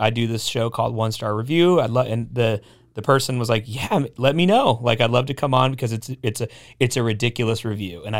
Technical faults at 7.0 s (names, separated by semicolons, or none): none